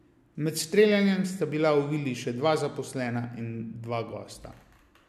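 Nothing in this bit of speech stands out as a technical fault, so there's really nothing to flag here.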